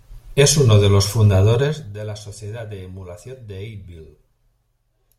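Speech, with zipper noise from 1.6 to 1.96 s, just after "uno de los". The level drops by roughly 15 dB there. It falls in 2 dB steps rather than a smooth slope. Each step lands abruptly and leaves a tiny click. At around 30 steps a second, those clicks merge into a fine ticking buzz that rides on the voice while the level falls. The gain was updated in coarse jumps, likely once per buffer, with no smoothing between them. Where the level moves smoothly, no such ticking is heard.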